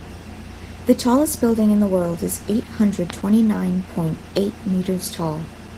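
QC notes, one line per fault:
throughout: Opus voice compression. The speech is muffled and slightly hoarse, with a faintly robotic edge. The low band comes through a linear-prediction coder with a coarsely quantised excitation, and the content above 8 kHz is a thin, blocky transform layer. The damage fits a hybrid-mode Opus stream at around 16 kbps with 20 ms frames. On a spectrogram the harmonics below 8 kHz look smeared and the energy above it appears in patchy, quantised blocks that change at 20 ms steps.
3.10 s and 4.37 s: loud pop. Each is a single sharp click lasting about 20 ms. The first comes after "world is eight hundred" and before "twenty nine point eight" and peaks about 15 dB above the speech. The second follows "hundred twenty nine point" and is about 10 dB above it. The speech carries on underneath both. A likely cause is a voltage spike from a connector or switch. On the waveform each shows as a narrow spike standing above the envelope, and on the spectrogram as a thin full-height vertical line.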